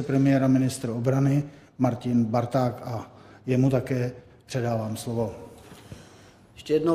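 Nothing here sounds wrong: there are no dropouts, glitches or other technical problems anywhere in the clip, so there's nothing to flag.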